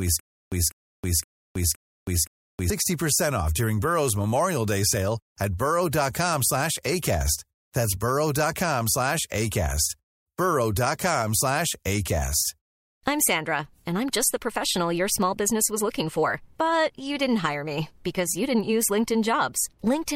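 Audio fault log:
0.00–2.70 s, stutter with silent gaps: already under way at the start, a 0.2 s speech fragment repeats five times, each followed by 0.32 s of silence, likely a stalled stream.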